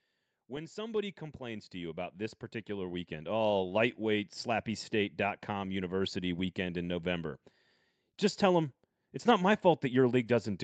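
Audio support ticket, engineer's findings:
Automatic gain rising, 0.34–3.8 s: level climbs about 12 dB gradually as AGC raises gain on quiet input; background noise swells with speech, unlike talker moving closer. Top end stops near 8 kHz, consistent with Opus wideband.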